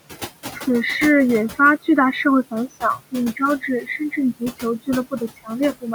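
A noise suppressor runs through the whole speech clip, judging frame by frame which frequency bands hold steady noise and pulling them down by about 15 dB. The room noise, sitting about 16 dB below the speech, is the material it works on. These are noise suppressor artifacts: the background drops away in the gaps and swells back under each phrase.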